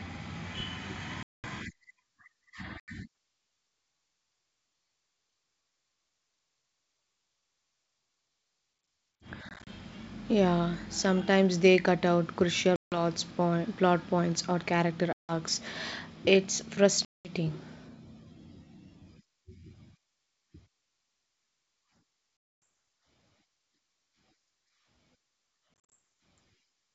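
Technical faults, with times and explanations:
1.23–1.45, 2.80–2.89, 9.49–9.68, 12.76–13.01 (after "they cut out crucial"), 15.13–15.33, 17.05–17.32, 22.65, 25.80–25.93 s: packet loss on an ADPCM call. These are hard silent gaps of roughly 80–250 ms, and the ones at 9.49 and 25.80 s are broken into short bursts. When the sound comes back it is slightly distorted for a moment, because the decoder's predictor and step size have drifted and need a few tens of milliseconds to resync.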